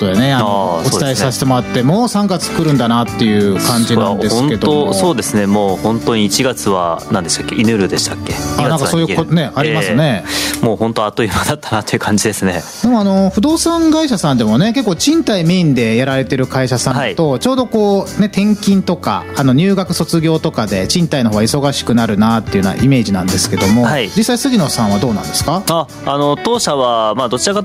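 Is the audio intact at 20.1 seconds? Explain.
No, gain pumping runs through the whole clip, including 20.1 seconds: the gain ducks around 10 dB under loud sounds, likely from excessive gain hitting a fast limiter.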